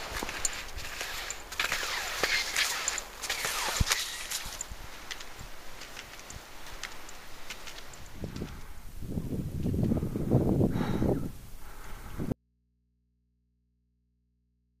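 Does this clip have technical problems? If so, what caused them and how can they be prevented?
Yes. An audio dropout to a faint residue begins at 12.32 s and runs to the end: the sound cuts off abruptly, leaving only mains hum roughly 40 dB below the signal. The source likely disconnected while the input stayed live and picked up hum. Secure connectors and monitor inputs during recording to prevent this.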